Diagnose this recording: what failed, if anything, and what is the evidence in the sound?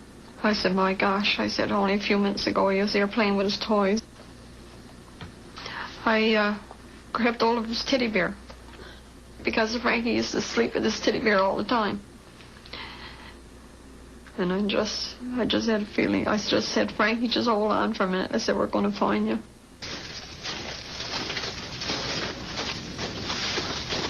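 Nothing failed; no stage shows any fault.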